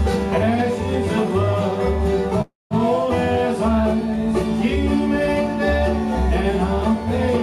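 At 2.41 s the sound hangs for about 0.3 s, a fading buzzy smear of the last bit dropping to near silence, until it resumes at 2.74 s right where it stopped. That's a call audio freeze, likely from delayed packets starving the jitter buffer, so nothing's lost, just pushed later.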